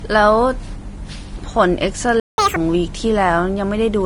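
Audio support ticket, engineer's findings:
Vorbis compression, whole clip. Speech sounds hissy and grainy, sibilants smeared into noise, consonant onsets soft. Likely a Vorbis encode at low quality, consistent with something near 32 kbps. The encoder dropped its cut-off and quantised the upper band so coarsely that detail turned to noise. Damage plainly audible throughout.

Playback stall, 2.20–2.38 s. Speech cuts out mid-flow for about 180 ms of dead silence, then resumes. Likely the player starved of buffered data or its output thread got blocked, so nothing reached the device until it recovered.

Catch-up at higher speed, 2.38–2.56 s. Right after the gap, speech runs at 2x speed with pitch jumped up roughly ten semitones, chipmunk-style, then snaps back to normal. Player resampling its backlog to recover the lost time.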